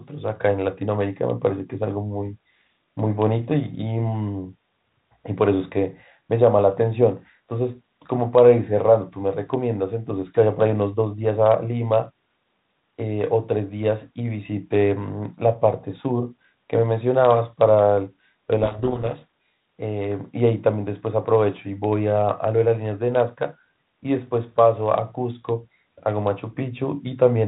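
Between 18.62 and 19.68 s a codec payload misread occurs: the receiver unpacks the G.726 code words in the wrong bit order and decodes each sample as the wrong difference value. The speech is buried in harsh distortion, then normal 32 kbit/s G.726 resumes.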